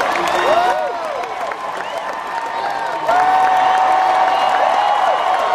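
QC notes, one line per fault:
0.73–3.09 s, one channel drops out: the sound abruptly falls by about 6 dB, then returns at 3.09 s. One stereo channel has likely gone silent, so the mono sum keeps only half the shared material and is otherwise unchanged.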